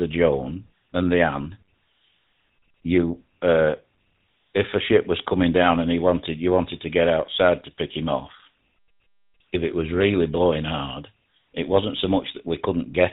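Speech, and the whole thing has gone through the GSM full-rate codec, with damage you can plainly hear from start to finish. Everything above 4 kHz is gone, so it has that boxed-in phone-line dullness. On top of that there's a buzzy, gravelly roughness. The codec rebuilds the vocal tract from a model and drives it with evenly spaced pulses, keeping only every third excitation sample. The grain fits the roughly 13 kbps rate of the original GSM phone codec.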